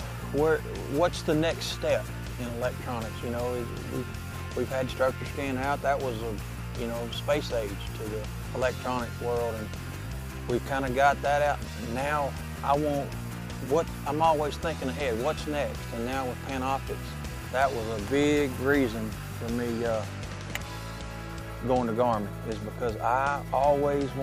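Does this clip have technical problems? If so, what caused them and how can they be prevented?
No, nothing stood out as a technical problem on listening to this clip.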